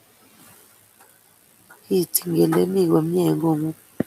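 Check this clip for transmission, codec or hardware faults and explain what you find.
Speech cut by the noise suppressor, at 0.98 to 1.47 s and again at 1.66 to 1.90 s: the suppressor mistook stretches of the speech for background and pulled them down with it, by up to about 17 dB and about 16 dB. Only about a tenth to a sixth of a second is hit in each span, so individual sounds seem swallowed or faint, while the room noise sits about 22 dB below the speech.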